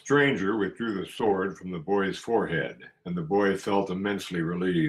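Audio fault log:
1.17–1.35 s, lost packet rebuilt from error correction: the speech never drops out, but for this short stretch it turns grainier and noisier, then returns to full clarity. The roughness and the unbroken flow point to several lost packets, perhaps five, each replaced by the low-bitrate backup copy carried in the following packet. Plain concealment would instead smear or repeat the previous sound and fade it.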